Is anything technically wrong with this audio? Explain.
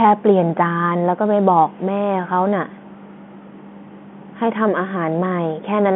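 No, the speech shows no technical fault; it carries the expected character of G.711 telephone coding, with a line band of roughly 150 Hz to 3.4 kHz, nothing above 3.8 kHz, and at most a faint trace of the format's level-following quantisation noise.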